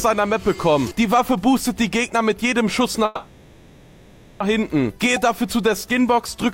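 A call audio freeze runs from 3.05 to 4.42 s: the last sound is held as a buzzy continuation for 1.35 s, then the audio picks up where it stopped, nothing lost, everything after now 1.35 s late. Delayed packets likely emptied the jitter buffer.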